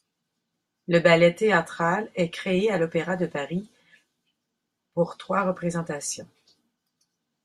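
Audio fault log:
No technical faults can be heard anywhere in this speech recording; the signal stays continuous throughout.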